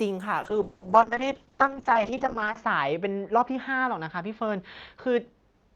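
Speech turns rough, watery and muffled from 0.43 s onward, a call bitrate drop: the encoder fell from 64 to 7 kbps, narrowing bandwidth from 20 kHz to 8 kHz.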